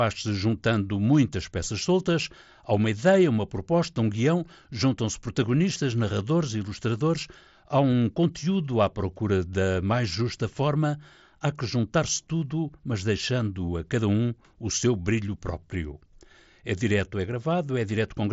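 No technical faults can be heard in this speech, which comes over a Bluetooth mSBC headset link working as intended, with its wideband limit leaving nothing above about 7.7 kHz.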